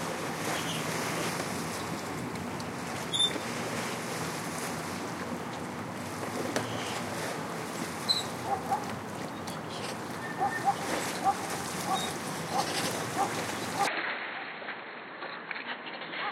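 Everyday sound recording. From 13.87 s to the end, the sound turns duller, with nothing above 4.3 kHz, drops about 5 dB with no gap, and gains a new low noise floor, likely an input switched to a poorer device.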